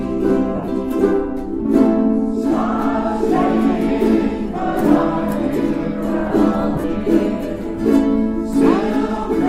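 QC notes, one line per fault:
0.56 to 0.68 s, lost LE Audio frames: over about 120 ms the sound breaks into brief hissy smears where tonal detail dissolves into noise. About 90 ms is missing, in gaps of up to roughly 30 ms, which points to several dropped 10 ms frames. The LC3 decoder filled each gap by replaying the last spectrum with scrambled signs.
6.76 to 6.84 s, lost LE Audio frames: the same smeared texture spreads across about 80 ms. About 50 ms is missing, with the longest gap near 40 ms.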